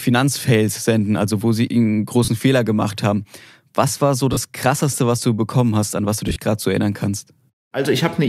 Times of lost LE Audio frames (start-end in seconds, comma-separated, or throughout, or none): 2.25-2.28, 4.33-4.37, 6.28-6.36